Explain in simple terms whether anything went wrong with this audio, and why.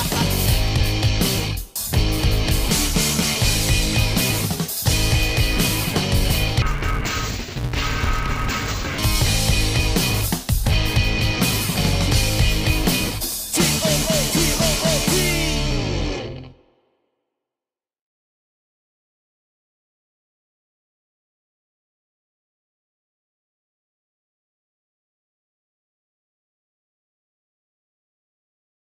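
Something did go wrong, from 6.62 to 8.99 seconds. The sound turns dull and robotic there, with a steady buzz underneath. This fault is called interleaved audio read as planar. The left and right channels arrive mixed together in small blocks. The player split each block into halves the wrong way. The blocks here are tiny, about 5.8 ms each, which fits a 256-sample block. So the buzz repeats about 172 times a second, and there is no clear drop in pitch.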